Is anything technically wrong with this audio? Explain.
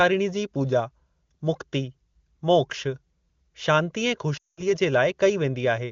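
Yes. There are lost AMR speech frames from 4.37 to 4.71 s, right after "शांती ऐं". Frames failed their error check, so the decoder kept repeating the last good pitch and vocal-tract settings while lowering the gain. The sound drops to near silence within two frames, then returns weak or rough for a moment. The gap of about 200 ms fits a run of roughly ten 20 ms frames. The wideband coding around it sounds clear, consistent with a high AMR-WB rate.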